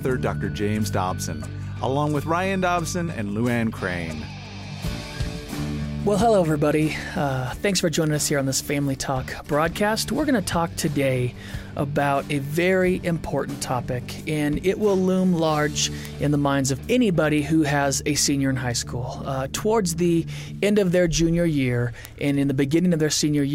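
The audio carries word clock ticks from 0.74 s to 23.38 s: short, sharp clicks at a steady interval of roughly 0.7 s, about forty in all. The receiving device is free-running on its own clock rather than locked to the source's, with a mismatch of roughly 30 ppm. Each time the two clocks slip past one another, a single sample is dropped or repeated and the surrounding samples are misread, producing one tick per slip.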